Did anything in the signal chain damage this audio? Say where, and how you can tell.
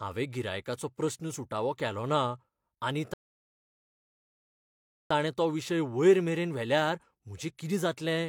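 Yes. There is a rebuffering stall at the playback stage. The speech cuts to silence at 3.14 s and stays silent until 5.10 s. It resumes on "ताणें तो" with nothing skipped. The player's buffer ran dry and waited for data, adding 1.97 s.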